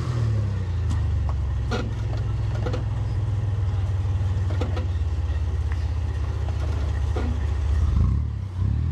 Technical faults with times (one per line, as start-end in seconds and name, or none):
3.11-3.15 damaged data in a compressed stream